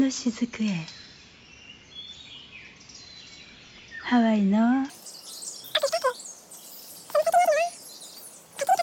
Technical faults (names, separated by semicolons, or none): wrong sample rate